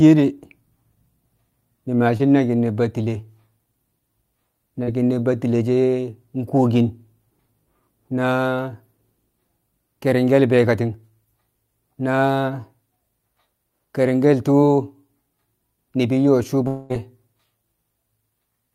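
Short concealed packet loss occurs at 2.17 to 2.21 s and again at 4.83 to 4.89 s, where about 20 ms and then about 40 ms of the speech failed to reach the decoder in time. Each gap was patched by extending the preceding sound, heard as a brief smear before the real audio resumes.

Long network dropout is the likely cause at 16.67 to 16.92 s. Roughly 220 ms of audio never arrived, and the receiver bridged the entire stretch by carrying the last sound forward as a fading buzz or hiss, with no silent gap, before speech returns minus the lost portion.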